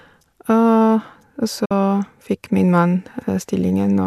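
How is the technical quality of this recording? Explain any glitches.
The speech has one glitch, a digital broadcast dropout from 1.65 to 1.71 s. The receiver stopped getting valid frames, fitting a loss of about two, and muted until good data returned. The sound fades out over roughly 8 ms, leaving a brief silent hole, and about 48 ms of programme is simply gone when it resumes.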